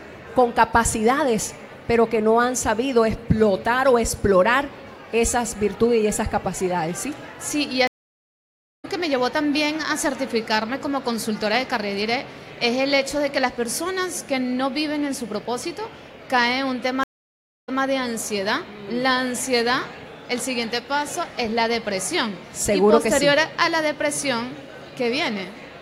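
A stream reconnect at 7.87 to 8.86 s drops the sound for 0.96 s, and it resumes roughly 0.7 s further on. A second reconnect at 17.03 to 17.82 s silences 0.64 s, then resumes 0.14 s earlier, repeating material as the server resends buffered audio to a fresh decoder.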